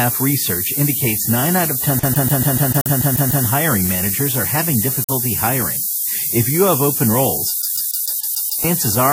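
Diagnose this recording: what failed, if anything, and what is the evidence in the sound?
A sample-format conversion fault, low bit depth with noise shaping, runs through the whole speech clip as a steady, thin hiss, about 5 dB above the voice and rising sharply toward the top of the band. That points to about 4-bit rounding with the error pushed upward. Ordinary tape or analogue hiss would sound flat and full-band instead.

At playback, a CD stuck on one turn repeats the same 146 ms of audio from 1.99 to 3.46 s, ten times before "hiring managers are having", and from 7.62 to 8.64 s, seven times after "you have open roles". The short mute at each jump and the rigidly even rate set it apart from irregular network packet repeats.

In the codec, a corrupt frame muted leaves an abrupt silent hole from 2.81 to 2.89 s, after "out of", and a longer one from 4.95 to 5.19 s, which fits about five frame lengths. 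Timing carries on unchanged afterward, which rules out a skip or a buffer underrun that shifts the sound.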